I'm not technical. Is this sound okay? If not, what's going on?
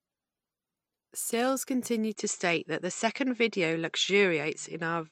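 No. At 2.15 seconds the speech suddenly turns duller and boxier, as if someone had swapped to a cheaper microphone, and it stays that way to the end. Right at the change there's a tiny gap of silence, the loudness shifts a little, and a faint new background hiss appears. This is most likely an input switched to a poorer device, which can't pass the crisp high sounds above about 8 kHz.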